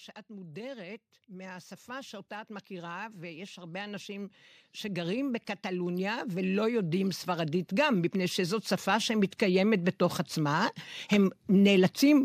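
Speech, with automatic gain rising across nearly the whole clip. From 0.27 s to 11.82 s the level climbs steadily, by about 23 dB in total. The voice and the background noise swell together, so the rise is in the gain, not the talker. An automatic gain control judged the input too quiet. It then pushed its gain up gradually. The slow, continuous ramp over more than eleven seconds is the signature of that behaviour.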